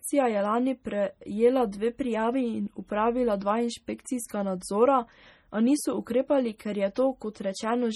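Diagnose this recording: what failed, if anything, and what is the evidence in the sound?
Watery, swirling speech with dull, band-limited treble throughout points to heavy MP3 compression at the codec stage, likely a low bitrate around 32 kbps starving the encoder.

Brief hiss smears attacks at 1.72 s (after "je lani prejela"), 4.05 s, 6.58 s (after "nadzora a niso ukrepali") and 6.95 s: pre-echo, block-spread quantisation noise.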